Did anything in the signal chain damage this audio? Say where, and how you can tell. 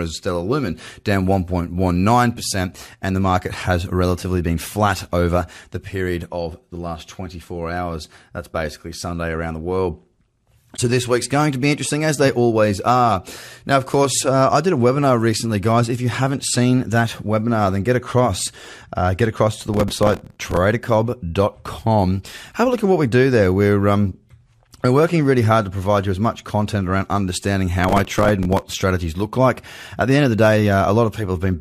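Yes. At the codec stage there is a corrupt frame concealed from 10.76 to 10.79 s, lasting about 36 ms, consistent with a single damaged AAC frame. The decoder detected the bad data and covered it rather than squeaking.

At the driver or buffer stage there is processor overload crackle from 19.69 to 20.57 s and from 27.81 to 28.79 s. Gritty, hard-edged tearing sits over the speech as dozens of missed deadlines, on buffers of roughly 3 ms, replay stale audio.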